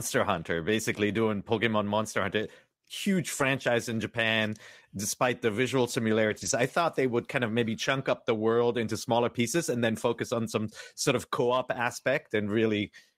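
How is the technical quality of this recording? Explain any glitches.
Three brief rough patches interrupt the speech. At 3.39–3.45 s, 6.29–6.51 s and 11.75–11.77 s, a lost packet was rebuilt from error correction: the next packet's low-bitrate copy fills the gap, so the waveform stays continuous but those frames sound grainier and noisier, showing as smeared texture on a spectrogram.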